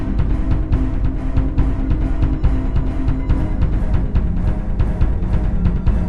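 From start to finish the sound is dull and gurgly, with a grainy, watery texture and top end that flickers in and out. That's likely MP2 compression starved of bits, switching off upper sub-bands and coarsely quantising the rest, which fits a rate around 80 kbps.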